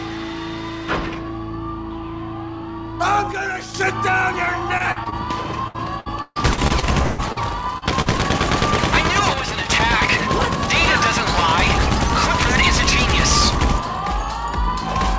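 At 3.32 s the level drops abruptly by about 6 dB and stays down until 3.74 s. This is most likely one channel dropping out. One stereo channel vanished briefly, so the mono sum lost half of what both channels shared, and anything only in that channel disappeared.

Repeated packet loss (robotic sound) follows twice. From 4.78 to 5.14 s, four gaps are patched, the longest 42 ms. From 5.68 to 7.38 s, eight gaps follow, up to 161 ms each, and about a third of that span is filled in. Each hole is covered by continuing the last sound. The result is choppy, with pieces missing.

Short concealed packet loss then appears at 7.78 s and again at 8.02 s. Each hole lasts about 40 ms. The decoder extends the preceding sound, then blends back into the real signal. This leaves a brief smear or wobble.

From 9.34 to 9.70 s the same sudden dip of about 6 dB returns, again consistent with one channel dropping out.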